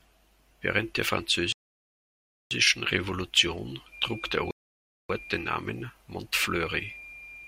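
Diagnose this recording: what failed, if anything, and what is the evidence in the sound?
Rebuffering stall at 1.52 to 2.51 s and again at 4.51 to 5.10 s, just after "trug der": the speech drops to silence for about 0.99 s and 0.59 s, then resumes exactly where it stopped. At the network and playback stage, the player's buffer emptied and it waited for more data, so the pauses add time without losing any audio.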